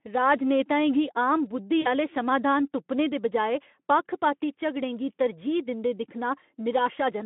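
At 1.81 s the speech on this narrowband Speex line, which carries a light hoarseness of its own, is interrupted by VoIP packet loss concealed by the speech codec. The decoder lost about 40 ms of audio, which fits two consecutive 20 ms frames. It stretched the last sound into a buzzy tone or coloured noise that fades until 1.88 s, then took a moment to recover. A plain dropout would leave silence or a hard gap instead of this smeared continuation.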